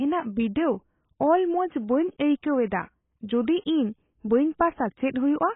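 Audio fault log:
throughout: AAC compression, heavy and likely at about 16 kbps; speech sounds dull and smeared, and a spectrogram shows a flat ceiling at 3.8 kHz with nothing above.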